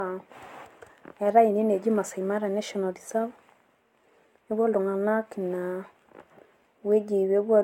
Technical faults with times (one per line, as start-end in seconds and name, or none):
0.00-7.64 generation loss